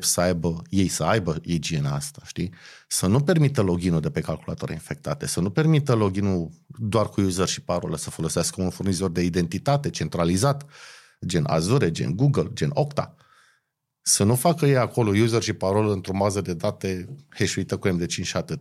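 Speech recording with no technical faults detected anywhere in the clip.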